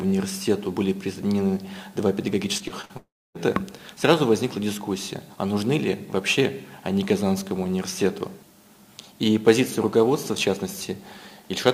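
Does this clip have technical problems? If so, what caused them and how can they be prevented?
Yes. From 2.57 to 2.91 s, repeated packet loss (robotic sound) gives choppy sound through several patched gaps up to 43 ms, unlike a dropout's single long hole.

From 2.97 to 3.36 s, the sound continues as a fading buzz, then about 0.28 s of silence before resuming with audio missing, likely a long network dropout.

A larger jitter buffer and a steadier network connection would prevent both.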